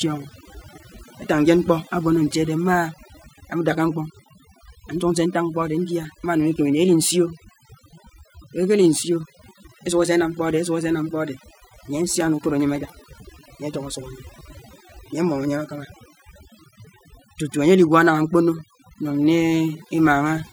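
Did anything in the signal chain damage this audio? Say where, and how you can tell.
Yes: overdone noise removal in the call processing stage gated quiet frequency bands throughout, leaving near-silent gaps with twinkling specks and taking quiet parts of the voice with them.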